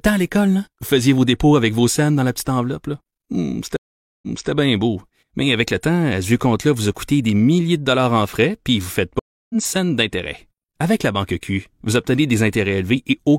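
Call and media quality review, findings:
Stream reconnect, 3.77–4.50 s. Dropout, about 0.46 s of silence, then audio resumes about 0.28 s earlier, before "bien beau". Repeated material. Player-side reconnect; server resent a burst, fresh decoder restarted mid-stream.

Stream reconnect, 9.19–9.56 s. Cut after "puis vous ne faites", about 0.31 s silence. Resumes roughly 0.3 s later at "scène d'intérêt". Speech skipped. Connection dropped, decoder rejoined the live position.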